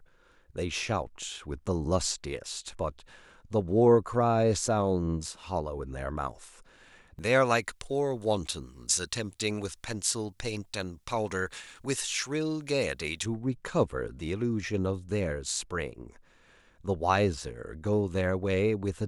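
From 7.19 to 13.26 s, pre-emphasis was left on: boosted treble never got its matching cut, leaving about 11 dB extra at 10 kHz and thin, sibilant speech.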